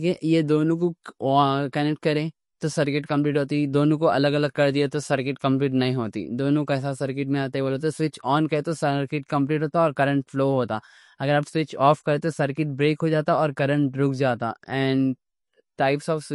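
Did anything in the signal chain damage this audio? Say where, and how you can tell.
Yes, at the codec: likely MP3 compression starved of bits, fitting about 48 kbps. Throughout, speech stops at 11.2 kHz and sounds watery, bands flickering.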